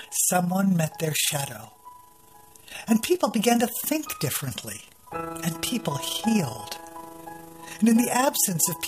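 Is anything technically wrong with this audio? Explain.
Yes, there is overlap-add ripple throughout the whole clip. Frames were rejoined with an overlap whose windows don't sum to a flat gain, so the level dips by about 6 dB once per frame, roughly 30 times a second. It sounds like a rough flutter. The waveform envelope shows regular scalloping, and the spectrogram shows vertical banding at that rate.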